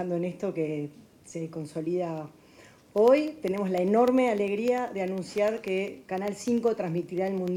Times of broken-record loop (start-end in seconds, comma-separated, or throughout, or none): none